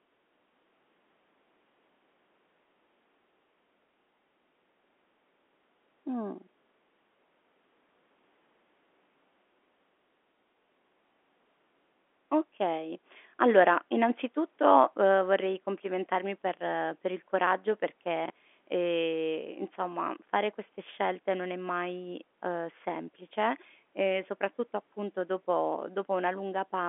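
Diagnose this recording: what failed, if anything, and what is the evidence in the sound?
Chunks out of order, at the network or jitter-buffer stage. Just after "per per il coraggio", between 18.26 and 18.30 s, a 20 ms chunk plays one slot late, after the chunk that should have followed it. Nothing is lost, but the sound jumbles for an instant, and there are three hard joins. On a waveform the cycles break discontinuously at each seam. A spectrogram shows three thin vertical broadband streaks, topping out near the G.711 line's 3.8 kHz ceiling.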